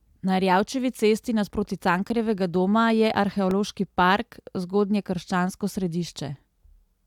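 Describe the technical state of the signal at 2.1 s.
A sharp tick at 2.09 s, between "cesti nasproti" and "doma je", marks a block of digital silence: about 9 ms of the audio replaced by silence, with abrupt edges.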